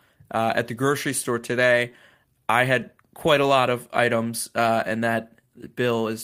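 Clock drift between sender and receiver runs throughout. The sender's clock is roughly 3% slow, so the receiver's buffer keeps draining and needs constant topping up.

Repeated timing corrections follow from 0.23 to 6.15 s. The receiver repeats short pieces, stretching playback to 98% speed and adding about 150 ms. If heard at all, this comes across as slight hiccups and an uneven pace.

Scattered short gaps appear from 0.44 to 3.45 s. About seven tiny holes, none longer than about 10 ms, were patched by continuing the last sound. They pass as brief ticks.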